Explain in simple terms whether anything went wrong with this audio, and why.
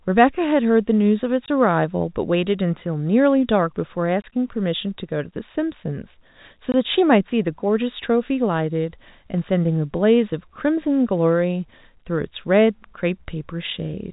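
Packet loss filled with silence: three times the network dropped a small piece of the speech on its way, and the receiver simply played nothing in its place. You hear brief 20 ms holes at 1.46 to 1.48 s, 4.22 to 4.24 s and 6.72 to 6.74 s. Each gap fits one lost packet and has abrupt edges. The narrow, landline-like sound comes from G.711 telephone coding, which is working as intended.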